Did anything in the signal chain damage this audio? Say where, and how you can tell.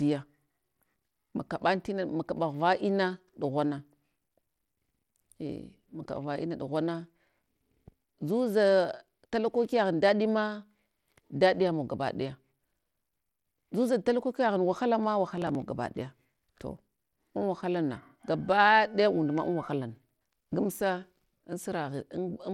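Yes. At the codec stage, the whole speech clip carries plainly audible coding damage: a gritty, grainy noise rides on the sound, and the treble thins and flickers. This is likely Bluetooth SBC compression with a small bit pool. The top sub-bands get too few bits and everything else is coarsely quantised, which fits a rate near 96 kbps. A spectrogram would show a hard ceiling at 17.4 kHz, with patchy, blotchy energy in the upper bands beneath it.

At the driver or buffer stage, there is a burst of processor overload crackle from 15.38 to 15.55 s, just before "gabaɗaya to an". The processor fell behind and missed several buffer deadlines in a row. Each missed buffer was skipped, leaving a tiny hard-edged gap. The pattern fits buffers of around 5 ms, with roughly seven lost. On the waveform these show as small abrupt breaks. A spectrogram would show thin vertical broadband clicks clustered in that stretch.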